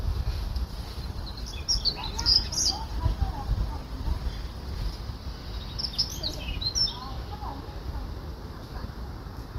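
From 0.69 s to 8.17 s the sound turns rough and muffled, losing its highs, consistent with a call bitrate drop from near 128 kbps toward 19 kbps, bottoming out for about 3.7 s.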